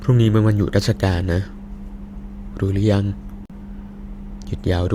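At 3.46 to 3.51 s the speech cuts abruptly to silence and resumes as if it had continued, likely a Bluetooth dropout from packets arriving too late.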